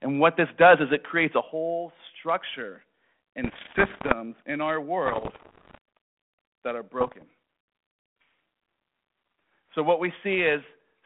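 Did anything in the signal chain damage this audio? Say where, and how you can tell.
Yes, at three stages.

Microphone overload at the converter input, 0.61 to 0.74 s, just before "is it creates a". The loudest peaks sit about 5 dB beyond full scale and are flattened, with roughly a tenth of the samples in that stretch clipped. That gives a harsh, crackly edge to those syllables. The likely cause is microphone input gain set too high, so the analogue-to-digital converter ran out of headroom.

Microphone volume stepped down in call processing at 1.41 s, between "is it creates a" and "whole structure". Speech and background fall together by about 6 dB in one abrupt step, rather than fading. Coming shortly after the clipped peak, this likely points to the call software's gain control detecting the overload and cutting the device's input volume by one notch.

Bit errors on an ADPCM link, in the transmission path, at 3.44 to 4.15 s, 5.06 to 5.78 s (right after "in our"), and 7.00 to 7.24 s. 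Each stretch carries pops, rough bursts and brief level jumps that ring on for a few milliseconds. A flipped bit throws off the decoder's step size and predictor until it re-converges. The first two bursts suggest an error rate around 2 percent, the last one nearer 0.7 percent. The underlying telephone-band coding, which fits 32 kbit/s G.726, adds only light graininess.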